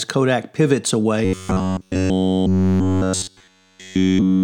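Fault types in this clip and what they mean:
Robotic sound from repeated short buffers: from 1.25 s to the end, the speech becomes a rigid metallic buzz at 93.8 Hz, likely from an 11 ms stretch repeated while audio is skipped. The waveform shows identical cycles; the spectrogram shows evenly spaced harmonic lines.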